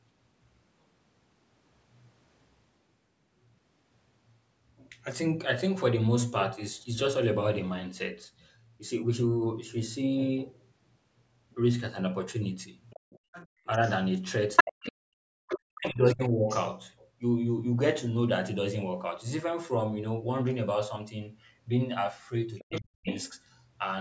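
From 12.9 to 13.9 s a faint second voice sits about 25 dB under the speech. It is the other side's voice leaking through, likely loudspeaker echo the canceller left in the microphone. It returns at 14.56 to 14.92 s, about 10 dB louder than the talker, and in scraps at 15.48 to 15.54 s (about 20 dB down), 16.23 to 16.58 s and 22.57 to 23.39 s (both about 15 dB down).

Inside the first stretch, between 13.08 and 13.65 s, the room sound sinks by up to about 40 dB for roughly a third of a second. This is background gated by the echo canceller, which clamped the microphone while the loudspeaker played.

From 14.63 to 16.48 s the talker's own voice dips and breaks up by as much as about 40 dB over roughly one and a half seconds. It happens again, briefly, from 22.68 to 23.06 s. This is speech suppressed in double talk, likely the canceller turning down both voices when it could not tell them apart.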